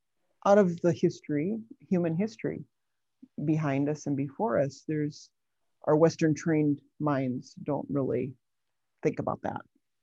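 No technical faults can be heard anywhere in the signal.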